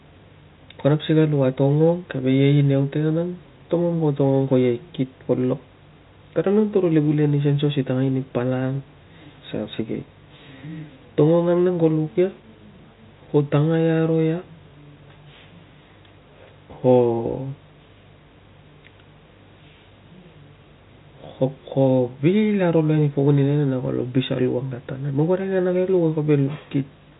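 Nothing stood out on listening to this speech, which carries the narrow band of G.711 telephone coding with nothing heard above about 3.8 kHz.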